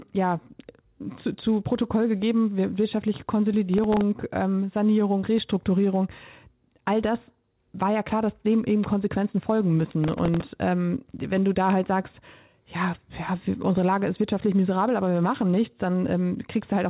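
The processor repeatedly missed deadlines on its very short audio buffers, replaying stale fragments with hard edges. This processor overload crackle tears grittily through the speech at 3.74–4.01 s, and longer at 9.90–10.42 s.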